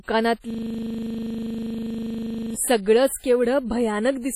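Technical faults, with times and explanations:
Throughout: WMA compression, likely. The audio has a ringing, washy quality with hiss that rises and falls with the signal, and nothing above 15.9 kHz. The heavy damage points to a low bitrate around 32 kbps, where coarse quantisation spreads noise over long blocks and drops weak components.
0.50–2.56 s: system hang loop. A single 40 ms slice of audio repeats exactly, some 51 times, at a 25 Hz rate. The system stalled while the sound hardware kept replaying the same ring-buffer segment until output resumed.
2.82–2.86 s: pre-echo. A hiss of about 43 ms arrives just ahead of a sharp attack, which sounds softened. The attack fell late in a transform block, so quantisation noise sized for the loud onset spread back into the quiet moment before it.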